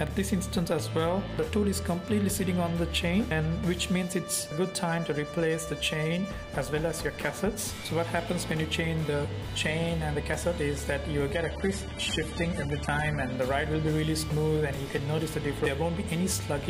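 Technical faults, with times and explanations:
11.33 to 13.33 s, adaptive stream at a lower bitrate: For two seconds the quality drops suddenly, with no gap or stall. The treble is cut off, with nothing above 11.8 kHz. Compression artefacts become easier to hear. This points to the stream switching to a lower-bitrate copy, consistent with AAC at roughly a third of its earlier rate, after the connection slowed. Full quality then returns abruptly.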